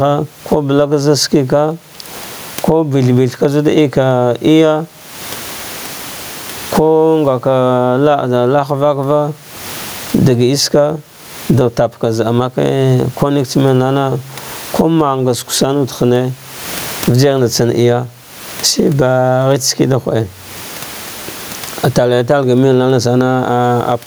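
Gain pumping runs throughout this speech: the gain swings by around 25 dB, likely from excessive gain clamped by a fast limiter, and the room noise sits about 38 dB below speech.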